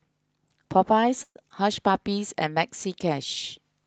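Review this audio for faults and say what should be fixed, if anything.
At 1.23 s the speech stops moving forward. The last sound is stretched into a fading buzz for about 120 ms, and the final 50 ms is silence. When it resumes at 1.37 s it picks up exactly where it left off, so nothing is lost. The wait has simply been inserted. That is a call audio freeze, most likely caused by packets held up in transit until the jitter buffer ran dry. Unlike packet loss, the audio afterwards is complete rather than skipped. Fix it by giving the jitter buffer more headroom or by tracking down the network stall.

From 1.49 to 1.52 s there is a short concealed packet loss. About 40 ms of audio never arrived, but only about 7 ms of synthesized continuation covers the hole. The rest is dropped, so the sound jumps ahead and the overall delay shrinks by roughly 30 ms. It is heard as a quick smear with a small piece of speech missing, where the freeze just before it lost nothing and only paused. 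Reduce it with forward error correction or redundancy on the lossy link.

Between 1.91 and 2.21 s there is a jitter buffer slow-down. Individual pitch periods are repeated to add about 40 ms, so the speech runs at about 90% of normal speed while keeping its pitch. Sounds are drawn out. It differs from a freeze because the speech keeps progressing, only more slowly, rather than halting on one held sound. Steadier packet arrival or a less aggressive buffer target would prevent it.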